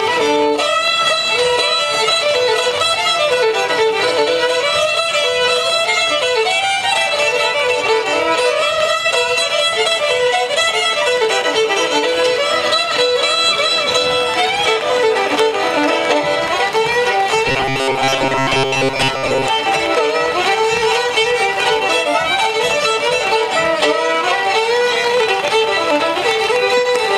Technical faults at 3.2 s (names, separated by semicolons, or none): none